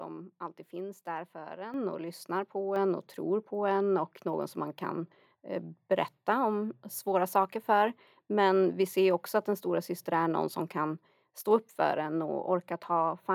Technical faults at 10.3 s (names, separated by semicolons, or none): none